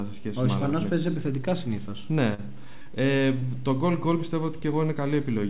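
At 2.34 to 2.40 s, 2.82 to 2.87 s and 3.39 to 3.44 s there are three spells of short concealed packet loss, with roughly 40, 40 and 20 ms of audio lost. The receiver papered over each gap by extending the preceding sound, then crossfaded back, so each spot comes across as a brief smear or wobble. On a spectrogram the band-limited picture, empty above 4 kHz as the narrowband call path implies, shows short smooth, repeated patches; the waveform shows copied stretches.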